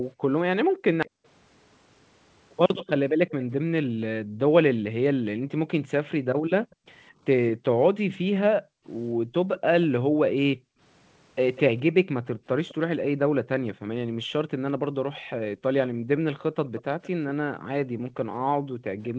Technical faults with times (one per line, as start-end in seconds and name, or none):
0.62-19.19 background gated by the echo canceller
1.06-3.53 echo leak
6.71-19.09 echo leak